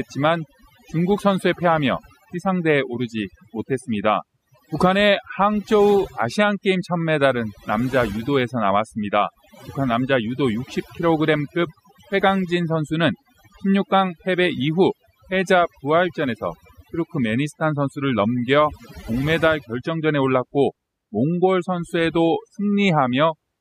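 Overdone noise removal runs through the whole clip, from start to finish. A noise reduction stage was pushed far too hard on a noisy recording, so any frequency band that sits close to its noise estimate gets pulled down sharply or switched off. Between phrases the background collapses to near silence dotted with twinkling, chirpy specks, while softer parts of the speech are stripped away with the noise.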